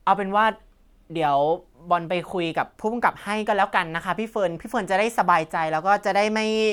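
A speech recording with nothing technically wrong to report.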